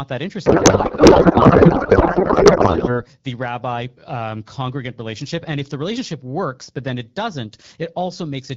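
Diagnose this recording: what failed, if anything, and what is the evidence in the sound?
Codec payload misread from 0.45 to 3.03 s, a fault at the codec stage. Through that span the speech is replaced by garbled noise and warble that barely tracks it, then it returns cleanly as AMR-WB HD Voice, consistent with about 12.65 kbit/s. The sound points to the sender packing AMR frames octet-aligned while the receiver unpacked them as bandwidth-efficient. Every field landed in the wrong bits until both sides agreed on the format again.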